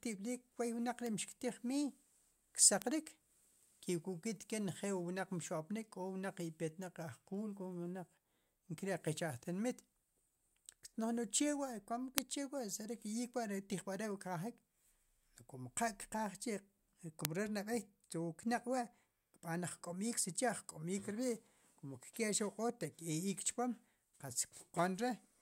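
Speech with four sharp, broadband ticks at 1.07 s (between "kwoy wnaq" and "ri' mxktiij miiy"), 2.82 s, 12.18 s and 17.25 s, peaking from about -22 to about -4 dBFS. Each is a bit error spike, where a single flipped bit throws one or two samples off by a power of two.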